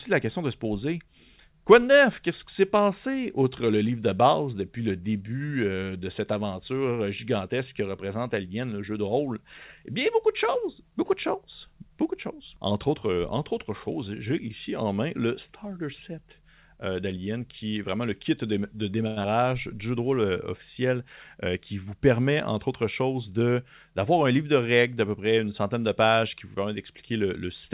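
From 19.07 to 19.19 s there is a short stall from a late packet: the jitter buffer ran dry, so the last sound is held for 92 ms before resuming with nothing lost.

At 19.22 to 19.27 s, short concealed packet loss leaves a brief smear. 60 ms of audio is missing, covered by only 18 ms of extrapolated fill, which pulls the delay down by roughly 40 ms.

From 21.11 to 21.64 s a jitter buffer speed-up trims about 50 ms in small pitch-period cuts, so the speech runs at 108% speed at unchanged pitch.

Throughout, the narrowband call path leaves nothing above 4 kHz, which fits G.711 A-law at 64 kbps.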